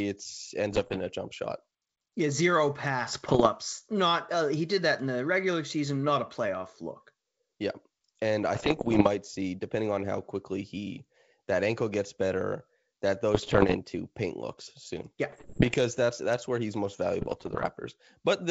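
Bit errors on an ADPCM link break up the speech at 0.72–1.01, 3.08–3.48, 8.55–9.09 (after "and I"), 13.35–13.76 (before "paint looks soon"), 15.30–15.76 and 17.21–17.69 s. At roughly 1 to 1.5 percent of bits flipped, each burst brings rough crackle and brief level jumps. Packet loss leaves gaps. Here the sound keeps going, because the disturbed step size and predictor ring on briefly. Between bursts the G.722 wideband sound is clear.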